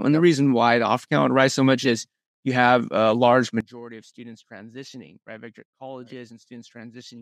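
From 3.60 s to the end, the sound collapses by about 21 dB and turns faint. The likely cause is one channel inverted, cancelling shared centre content in mono. Unlike a plain level drop, the balance changes: centred material vanishes, leaving only a faint copy of the small mismatch between the channels.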